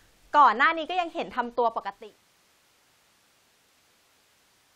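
No technical faults in this speech clip; the level eases down in a smooth editorial fade-out that begins around 1.5 s and completes by 2.3 s with no click or hard edge.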